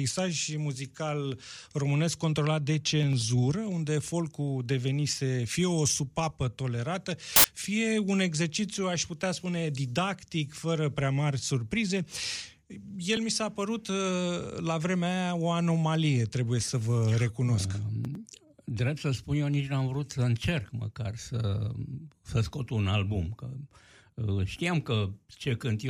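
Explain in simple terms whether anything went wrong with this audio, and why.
From 7.36 to 7.44 s there is a sharp burst of loud hiss: samples built from the wrong bytes. Each sample's bytes were put together wrongly, so tiny jittery details became huge values. Unlike background noise, it's sudden, very loud, and replaces the sound entirely.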